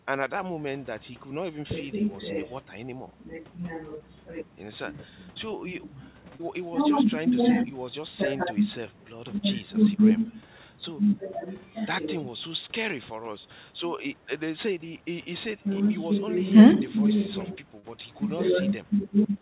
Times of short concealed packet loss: 3.98-4.02, 6.36-6.41, 17.79-17.85

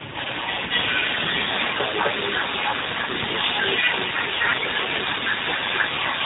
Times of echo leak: 0.00-6.25

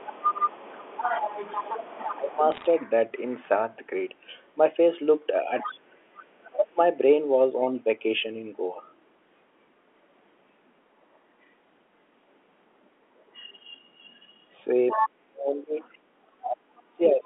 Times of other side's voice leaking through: 0.00-3.19, 5.59-6.56, 8.86-8.95, 13.19-17.11

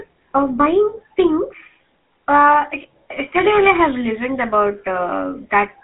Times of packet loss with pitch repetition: none

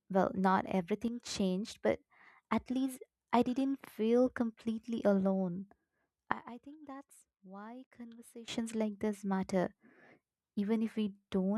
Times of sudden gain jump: 1.08-1.20, 6.32-8.48

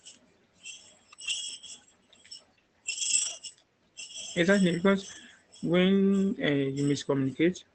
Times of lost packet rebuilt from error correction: 1.29, 2.93-3.35, 5.11-5.17

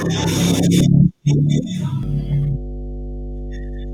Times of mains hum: 2.03-3.94

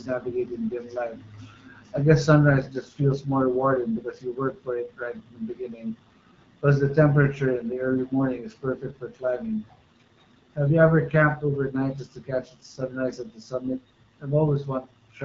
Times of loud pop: none

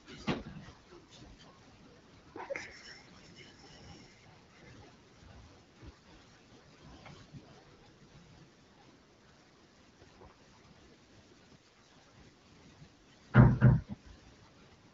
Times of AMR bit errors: 3.03-3.27, 11.55-12.05

